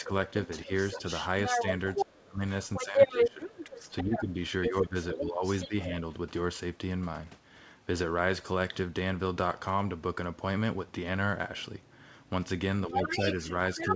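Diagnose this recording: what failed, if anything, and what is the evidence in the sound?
Call processing: speech suppressed in double talk, 0 to 5.92 s and 12.88 s to the end. The voice dips, by about 15 dB at worst. The likely cause is the echo canceller turning both sides down.

Call processing: the other side's voice is leaking through. It is about as loud as the talker from 0.51 to 5.69 s and fainter from 13.03 s. The echo was likely not fully removed.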